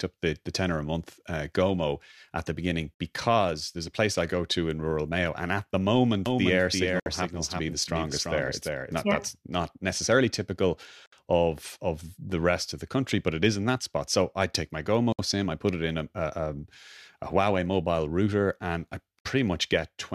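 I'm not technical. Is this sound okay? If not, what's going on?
No. Two kinds of problem can be heard in this speech.

First, there is a brief dropout, about 60 milliseconds of silence, at 2.94, 7.00, 11.06, 15.12 and 19.19 seconds, spaced every 4 seconds. The one at 15.12 s comes right after "I take my", and the one at 19.19 s right after "mobile router and I". The sound cuts out briefly and then resumes where it left off. This is a gap at a join of encoded pieces. The recording was compressed in separate 4-second chunks and stuck together without trimming the bits of silence that compression adds to the start and end of each chunk.

Second, from 6.26 to 9.02 seconds, just after "and at the", you hear the talking twice, with a slightly quieter copy trailing about a third of a second behind. The copy is as clear as the original, with no echo tail or room sound, and it switches on and off abruptly. 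This is a doubled audio track, most likely the same audio captured a second time through a slower route and mixed back in.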